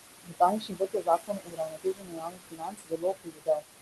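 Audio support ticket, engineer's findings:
Noise suppressor artifacts, whole clip. Suppressor attenuating bands it classifies as steady noise by about 20 dB, frame by frame. Result: room noise sinks in pauses and swells back under speech. Room noise itself sits about 9 dB below speech and is not a fault. Top end rolls off near 12 kHz, which fits an Opus super-wideband call path and is normal.

Speech cut by the noise suppressor, 0.23–0.41 s and 0.59–3.65 s. Suppressor misclassifying low-level speech as noise and pulling it down with the background. Deepest drop about 20 dB in the first stretch and about 22 dB in the second. Roughly 150 ms affected early, then around 3 s in the long second stretch. Soft consonants, word endings or a quiet phrase come out swallowed or faint.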